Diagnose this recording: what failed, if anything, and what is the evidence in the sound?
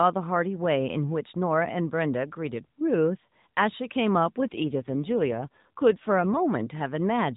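Network-commanded AMR rate drop: from 4.52 to 6.38 s the speech turns rough and synthetic with no gap, which fits a 12.2 to 5.9 kbps step.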